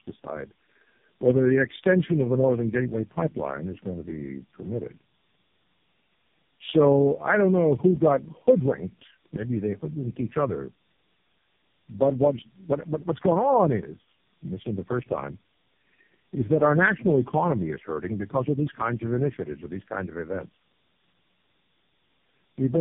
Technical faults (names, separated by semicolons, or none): tandem speech coding